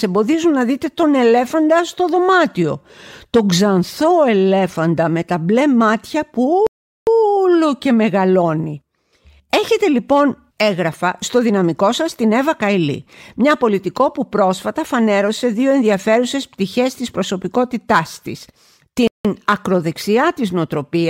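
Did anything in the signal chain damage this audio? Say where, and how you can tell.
Yes: the speech drops to silence at 6.67–7.07 s and 19.08–19.25 s, then resumes exactly where it stopped. These are rebuffering stalls: playback starved of downloaded data and waited.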